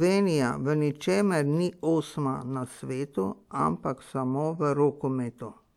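No technical faults are audible.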